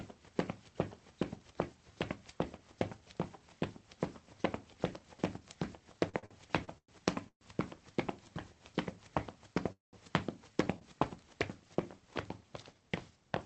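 From 6.09 to 6.89 s, packets kept reaching the receiver late, so its jitter buffer ran dry five times. This is repeated stalls (stutter). Each gap was bridged by extending the previous sound, about 268 ms in all with the longest at 105 ms, so roughly a third of that stretch drags and stutters.

At 7.28 to 7.42 s and again at 9.72 to 9.94 s, the audio halts and the last sound trails off into silence, lasting 90 ms and then 160 ms. It resumes where it left off, 126 ms and 206 ms late. This is a call audio freeze, likely from packets held up in transit emptying the jitter buffer.

From 10.79 to 10.82 s, a single late packet left the buffer briefly empty, causing a short stall from a late packet. The receiver stretched the preceding sound by 24 ms before continuing, so it holds slightly too long with a slight buzz or dip. The call path's Opus coding limits the top end to 8 kHz.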